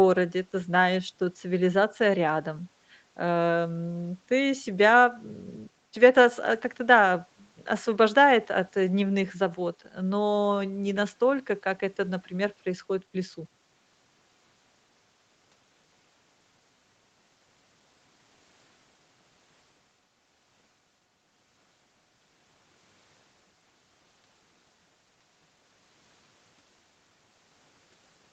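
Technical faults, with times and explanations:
No technical faults are present: the speech shows the ordinary character of a call's microphone processing and Opus codec path, with nothing above 8 kHz and a coding quality that fits a bitrate of around 32 kbps.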